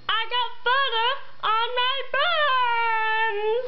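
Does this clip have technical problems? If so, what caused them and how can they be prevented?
No, there are no technical problems to hear in this clip. Since nothing has gone wrong, there is nothing that needs preventing.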